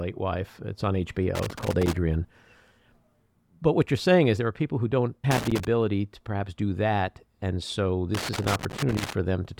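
Irregular bursts of crackle and scratching break into the speech three times: from 1.35 to 1.97 s, from 5.31 to 5.65 s between "are people who don't" and "to perhaps do that", and from 8.15 to 9.13 s. This is loose connector crackle. A worn or dirty contact in the signal path keeps opening and closing as it shifts, chopping the audio into ragged fragments, and any DC on the line turns each break into a small pop.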